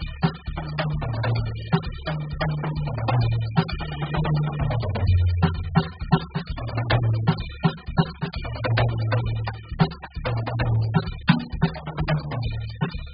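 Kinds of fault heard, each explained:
AAC compression: Throughout the music nothing is heard above 5 kHz, so the top end sounds dull and closed in, and heavy damage leaves the remaining content smeared with a warbling, watery texture. This is likely AAC-LC coding at a very low bitrate, consistent with about 8 kbps, where too few bits forced the encoder to cut the bandwidth and coarsely quantise its frequency lines, leaving gaps in the spectrum.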